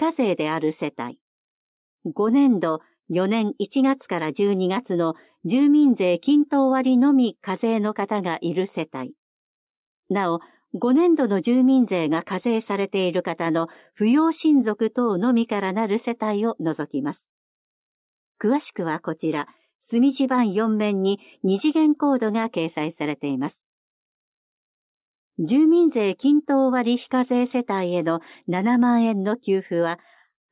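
Nothing to flag: no audible technical faults anywhere in the recording.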